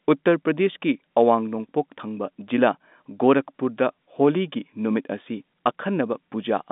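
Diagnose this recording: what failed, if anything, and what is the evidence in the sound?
Listening through this speech, heard over what sounds like an ordinary telephone line band, nothing stood out as a failure at any stage.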